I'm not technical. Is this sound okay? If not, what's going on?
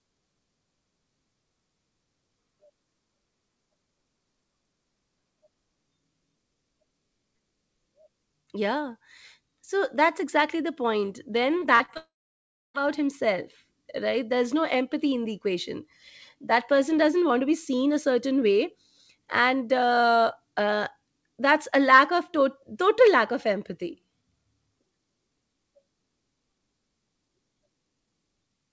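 No. Repeated packet loss (robotic sound) runs from 11.60 to 11.97 s. Four brief pieces of the audio, the longest about 40 ms, never arrived, and each hole was patched by stretching the previous sound, so about a quarter of that stretch sounds choppy and mechanical.

A long network dropout follows, from 11.97 to 12.76 s. The sound smears into a brief fading buzz and then goes quiet for about 0.65 s, likely because the connection stopped delivering audio. When the audio returns, nearly 0.8 s of material is gone.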